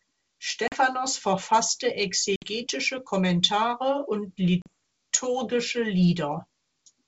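Packet loss on an ADPCM call strikes at 0.68 to 0.74 s, 2.36 to 2.51 s and 4.62 to 4.68 s, with about 40, 60 and 40 ms of speech missing, which fits two or three lost packets each time. The gaps are filled with silence and cut off abruptly. Afterwards the decoder's adaptive predictor and step size no longer match the sender's, so the speech comes back with brief slight distortion before settling within tens of milliseconds.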